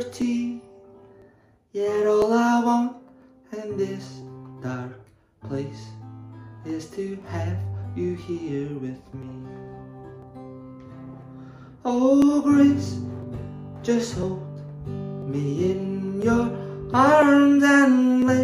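Clock drift buffer slips run from 0.22 s to 18.22 s as a click or pop that recurs once every 1.0 s, around twenty times in all. The likely cause is two devices running on separate clocks that disagree by roughly 700 ppm, so the buffer between them steadily fills or drains until a block of about 30 samples is dropped or repeated. Each slip breaks the waveform's continuity, and the sound clicks at that point.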